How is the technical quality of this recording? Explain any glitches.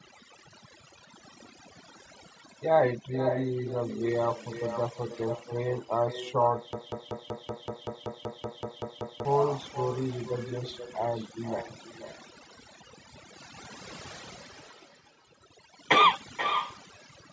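The technical quality is poor: the speech carries heavy processing damage throughout, a constant echo, and a stretch where the audio sticks in a loop.

Overdone noise removal affects the whole clip. A noise reducer set far too aggressively has pulled individual frequency bands down to nothing wherever they came close to its noise estimate, taking the quieter parts of the voice with them. The background drops to near silence with small twinkling artefacts. A spectrogram would show a patchy, moth-eaten texture, with isolated bright specks scattered through dark gaps between syllables.

Echo with no canceller also runs through the entire recording. The far end's loudspeaker output was picked up by its microphone and nothing removed it, so every phrase returns about half a second later, about 8 dB quieter, sounding thinner. On a waveform, each burst of speech is followed by a smaller, smeared copy. 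A spectrogram shows the same harmonic patterns repeated faintly, offset in time.

A broken-record loop occurs from 6.73 s to 9.25 s. A 190 ms fragment repeats back to back 13 times, and whatever should have played in those two and a half seconds is lost. The likely cause is a stalled player, encoder or stream that kept resending the last chunk it held. On a waveform this appears as an identical short shape tiled in perfect repetition, and the spectrogram shows a rigid, stuttering block. The call's microphone processing is also audible in the recording, with nothing above 8 kHz.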